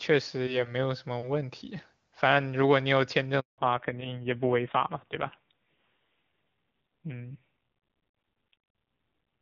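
A speech recording carried over a phone call breaks at 3.40 s with a handover gap: the sound fades within a few tens of milliseconds and stays silent for 180 ms until 3.58 s, as the call switches networks and no speech frames reach the receiver. On the waveform this is a flat line, and on the spectrogram a clean vertical blank band. From 3.58 s to the end there is a fallback to narrowband. Before the switch, HD Voice wideband coding carries energy up toward 7 kHz. After it, everything above 4 kHz is gone, leaving a hard horizontal ceiling on the spectrogram. The sound turns dull and gritty, which points to a low-rate AMR narrowband mode around 5.9 kbit/s.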